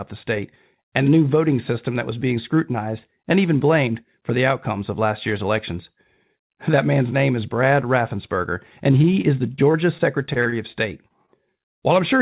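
From 8.92 to 11.30 s the sound turns choppy and robotic. This is repeated packet loss: a string of short gaps, the longest about 38 ms, each patched by stretching the previous sound, all over band-limited audio ending at 4 kHz, consistent with a G.711 call.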